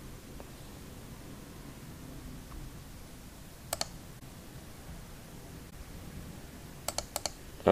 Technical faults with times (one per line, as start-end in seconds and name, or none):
4.19-4.22 corrupt frame concealed
5.70-5.73 corrupt frame concealed